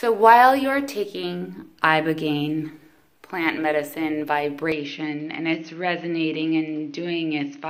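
From 4.72 s to the end, the sound turns duller and boxy, with nothing above 6.4 kHz, and drops by roughly 5 dB. There is no gap at the change. A new, faint noise floor appears well below the signal, roughly 45 dB down. This points to the input likely being switched to a poorer device, a second microphone or a headset call profile, whose narrower band, different tone and own background noise replace the original capture.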